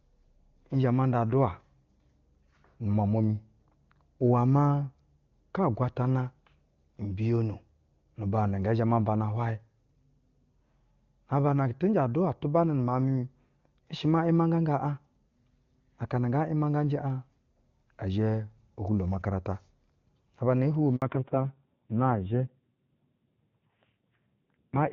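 At 20.96 s a handover gap opens: the call switches networks, no frames arrive, and the speech drops to silence for 60 ms. On a waveform this is a flat line, with the sound dying away within a few tens of milliseconds; a spectrogram shows a narrow, fully blank vertical strip across all frequencies.

From 21.02 s to the end, the call falls back to narrowband. The HD Voice link had been carrying content up to around 7 kHz, but now nothing above 4 kHz survives, so the speech turns muffled, thin and raspy, which fits a low-rate narrowband mode near 5.9 kbit/s. A spectrogram shows the upper band abruptly going empty above a hard ceiling at 4 kHz.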